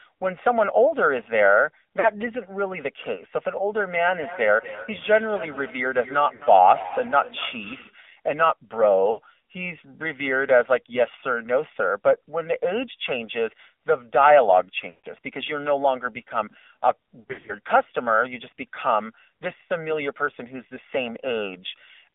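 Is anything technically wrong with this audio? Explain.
Yes, there are four distinct faults, two lasting the whole clip and two at specific times.

Channel delay (comb filtering) runs throughout. One channel arrives about a millisecond and a half late, and summing to mono cuts notches starting around 300 Hz. The result is a hollow, phasey tone. Unlike an echo, there is no audible repeat.

The AMR narrowband mobile codec also runs throughout. Nothing passes above 3.6 kHz or below 300 Hz. The plainly buzzy, synthetic speech fits a low bitrate near 7.4 kb/s, which is coarser than ordinary telephone band-limiting.

Lost AMR speech frames occur at 2.00–2.09 s, 6.36–6.43 s, 9.12–9.20 s, 14.90–15.07 s and 17.20–17.55 s. The decoder repeats the last sound with falling gain, so the short gaps warble briefly and the longer ones stretch and fade. The last span breaks up over about 0.28 s rather than dropping out cleanly.

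Feedback echo between two devices runs from 4.06 to 8.02 s. Another device's loudspeaker feeds back into the call, so speech returns about every 0.2 s, peaking around 15 dB below the voice and thinner on each pass. Its spaced repeats distinguish it from the steady comb coloration.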